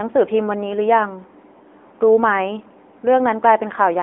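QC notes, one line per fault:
throughout: AMR narrowband mobile codec. Speech is held to 250 Hz–3.5 kHz with a plainly buzzy, synthetic edge rather than plain filtering, which fits a 10.2 kbps mode.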